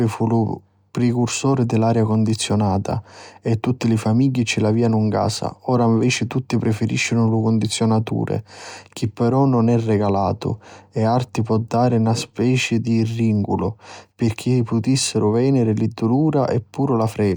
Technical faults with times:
none

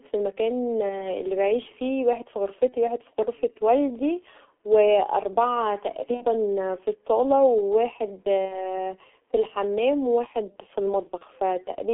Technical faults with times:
0.00-11.94 G.723.1 codec
0.89-1.04 VoIP packet loss concealed by the speech codec
2.69-2.74 VoIP packet loss concealed by the speech codec
6.14-6.25 VoIP packet loss concealed by the speech codec
8.45-8.66 VoIP packet loss concealed by the speech codec
11.18-11.24 VoIP packet loss concealed by the speech codec

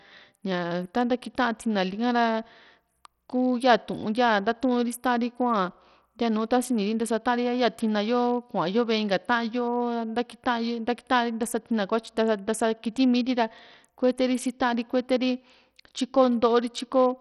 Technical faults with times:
0.00-17.20 Bluetooth SBC compression

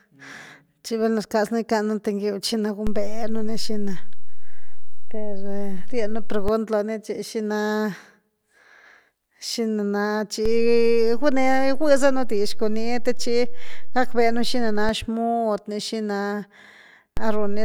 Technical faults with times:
2.87-6.48 DC step
10.45-14.89 DC step
17.17-17.64 DC step

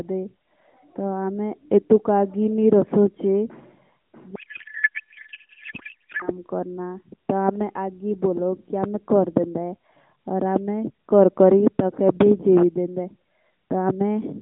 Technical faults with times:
4.36-6.30 codec payload misread

